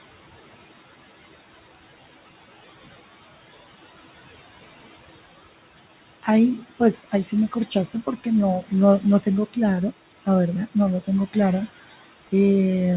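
Noise suppressor artifacts run through the whole speech clip. A suppressor is treating the steady room noise, which sits about 16 dB below the speech, as something to remove. Frame by frame, it pulls each band it judges to be noise down by about 16 dB. The noise therefore sinks away in the gaps between words and swells back up underneath them. All of this happens within a band that stops at 4 kHz, which fits a G.711 A-law call path.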